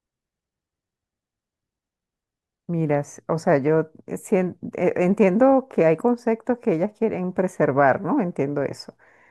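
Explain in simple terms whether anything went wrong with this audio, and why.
Something did go wrong, very briefly. At 5.71 seconds there is a corrupt frame decoded. The speech is stored as compressed chunks called frames, and a single frame got damaged, with some of its data scrambled. The player decoded it anyway instead of skipping it. The garbled data put sound at the wrong pitches for that tiny moment. You hear it as a quick blip or squeak, lasting only about a hundredth of a second.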